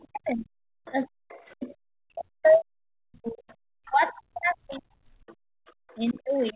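From 0.03 s to the end, the talker's speech keeps dipping, thinning out and breaking into fragments, at its deepest falling by around 40 dB so that parts almost vanish. This is speech suppressed in double talk. The likely cause is that both sides spoke at once and the echo canceller, unable to tell the talker apart from the loudspeaker echo, pulled the whole microphone signal down rather than risk passing echo.

A second, fainter voice slips in from 0.85 to 1.53 s, and again from 3.49 to 6.53 s. It sits far beneath the talker, roughly 25 dB down at first and about 30 dB down later. This is the other side's voice leaking through, likely because the far end playing on the device's loudspeaker was not fully cancelled at the microphone. Throughout, nothing reaches above 4 kHz, which fits a narrowband call codec such as G.711.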